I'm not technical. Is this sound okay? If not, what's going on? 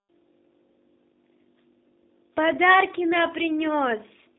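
No. From start to finish, the speech sounds thin, slightly rough and a bit robotic, like an old internet phone call. That is the G.729 codec, a voice compression method used for internet calls. It doesn't store the actual sound. It stores a rough description of how the voice is formed and rebuilds the speech from that, which is why it sounds synthetic. It also keeps only a narrow band, about 200 Hz to 3.7 kHz, so everything higher is gone.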